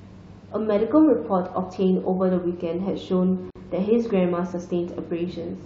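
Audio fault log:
3.50–3.55 s, gap at a join of encoded pieces: the speech halts for about 50 ms and then resumes exactly where it stopped. Separately encoded segments, likely about 4 s long, were joined with their encoder delay and last-frame padding left in. Unlike a dropout, no sound is lost, and the edges are smeared rather than clicking.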